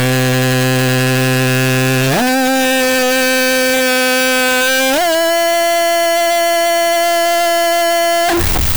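From start to finish the music is harsh and very loud, with a likely float read as integer fault: 32-bit float samples decoded as 32-bit integers. The waveform looks nearly square at an almost fixed, high level, and the spectrogram fills with dense broadband energy.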